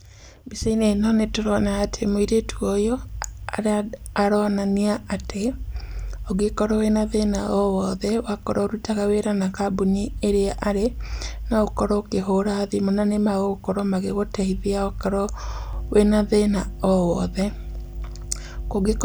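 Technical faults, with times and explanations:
15.73 to 19.04 s, mains hum. After "na nĩmagũkorwo magĩgũteithia okorwo", a steady 50 Hz tone runs to the end. It is about 10 dB below the speech. Power-line current is leaking into the signal.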